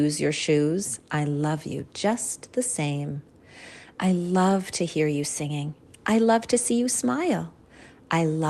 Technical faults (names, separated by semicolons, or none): none